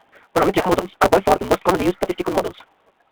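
Throughout, the speech passes through the AMR narrowband mobile codec at 10.2 kbps, confined to roughly 300 Hz to 3.6 kHz, with plainly audible buzzy, synthetic coding damage.

A block size mismatch (truncated) runs the whole way. Each block's tail is discarded, giving a steady 188 Hz buzz and speech hurried 1.88 times with its timbre kept, which fits a 256-sample read.

From 0.79 to 0.84 s, lost AMR speech frames leave a 60 ms gap, consistent with three dropped 20 ms frames. The decoder stretches the last sound and fades it before speech resumes.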